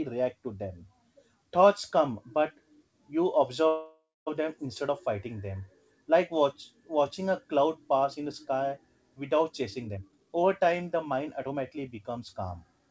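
From 3.68 to 4.29 s the speech stops moving forward: the last sound is drawn out as a fading buzz that thins to about 240 ms of silence, and then the talker picks up exactly where they left off with "them instead of fighting". This is a call audio freeze, likely from packets held up in transit so the jitter buffer ran dry. The receiver padded about 0.59 s of stand-in sound, so nothing is lost but playback now runs 587 ms later.

From 9.50 s to the end at 12.87 s the speech sounds rushed, about 117% of normal speed, with the pitch unchanged. This is a jitter buffer speed-up: with more audio queued than it wants, possibly the backlog from the earlier stall, the receiver repeatedly cuts out tiny slices one or a few pitch periods long, trimming roughly half a second to shrink the delay. The dull top end, with nothing above 8 kHz, fits a wideband call codec such as G.722.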